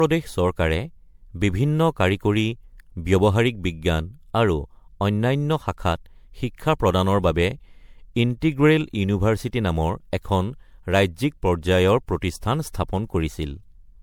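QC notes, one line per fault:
Throughout, generation loss: the speech sounds swirly, hollow and smeared, with blurred consonant attacks, worse than a single encode at what sounds like around 96 kbit/s MP3 would give. The likely cause is roughly seven encodes, each piling fresh quantisation noise and spectral holes onto the last. Content stops near 19.9 kHz.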